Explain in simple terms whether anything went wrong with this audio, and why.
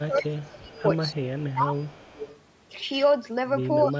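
The voice dips and fades from 0.0 to 0.76 s, 1.11 to 1.77 s, and 3.86 to 4 s. This is speech suppressed in double talk. The likely cause is both sides talking at once, so the call muted the voice.

A faint, delayed copy of the voice follows about 247 ms behind, from 0.24 to 0.82 s, 1.38 to 1.52 s, and 1.82 to 2.4 s. This is echo leak, likely from a loudspeaker's sound reaching the microphone.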